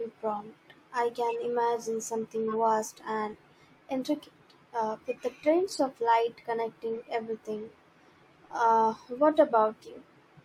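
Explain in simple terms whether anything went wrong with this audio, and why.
Four short glitches interrupt this speech, at 1.30 to 1.35 s, 2.48 to 2.55 s, 5.68 to 5.79 s, and 9.72 to 9.88 s. Each is a corrupt frame decoded. The audio was stored in small compressed chunks. Some of those chunks got damaged, but the player used them anyway. So sound energy landed at the wrong pitches. You hear a brief chirp or noisy blip. The longer glitches fit several damaged chunks in a row. The last one is the faintest.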